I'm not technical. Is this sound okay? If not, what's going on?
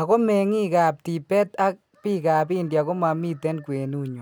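Yes, this sound is okay, and there's nothing going on that needs fixing.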